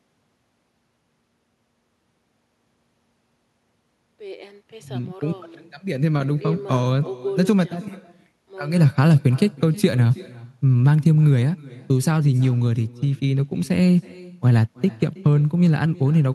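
Echo with no canceller throughout: far-end loudspeaker sound reaches its microphone uncancelled, so speech returns roughly a third of a second later, about 24 dB quieter.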